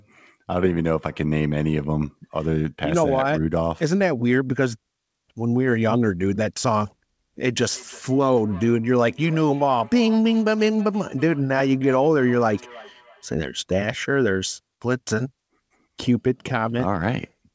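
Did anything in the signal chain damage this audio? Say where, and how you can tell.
Yes. A feedback echo between two devices, where a second device in the room replayed the call and the first microphone picked it up again, escaped echo cancellation. From 7.69 to 13.36 s the speech returns roughly every third of a second, thinner and ringing, peaking about 21 dB below the direct sound.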